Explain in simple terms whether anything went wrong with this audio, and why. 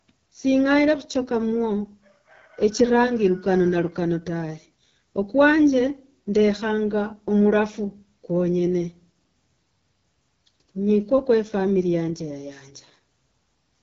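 From the first second to the last, the speech sounds rough and raspy, and the top end is dull, with nothing above about 7 kHz. That is the AMR wideband (HD Voice) codec used for phone calls, here squeezed to one of its lowest settings. It rebuilds the voice from a simplified model of the throat and mouth plus synthetic noise for the highest part, and at such a low setting that model gets coarse.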